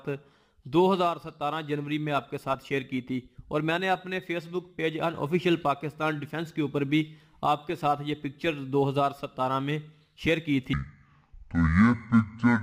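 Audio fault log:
10.74–12.63 s, section at the wrong speed: likely played against the wrong clock at 0.575 times speed, so the sound slows and drops about ten semitones.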